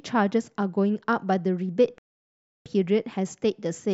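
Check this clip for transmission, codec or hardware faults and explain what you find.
One fault is present: a playback stall from 1.98 s to 2.66 s. The speech cuts off abruptly in mid-flow and the output falls completely silent for about 0.67 s before resuming. The cause is likely the player running short of buffered data, or its output thread being held up, so nothing reached the output until it recovered. The gap sounds like a hard dropout rather than a fade or a natural pause.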